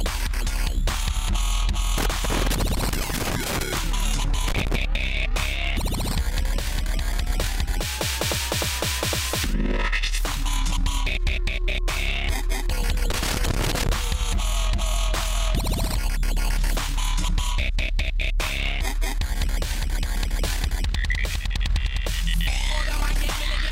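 Loose connector crackle appears from 1.98 to 3.78 s, 4.48 to 4.76 s and 13.11 to 13.89 s: an intermittent contact chops the audio, producing irregular scratchy bursts.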